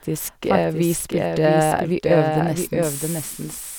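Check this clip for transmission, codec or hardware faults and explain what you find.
One fault runs through the whole clip: a doubled audio track. A second capture path or misaligned edit likely mixes in a late copy, so the speech repeats about 0.7 s behind, roughly 5 dB quieter, dry and full-band.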